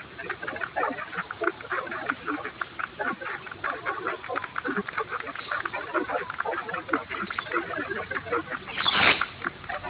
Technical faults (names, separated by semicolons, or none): none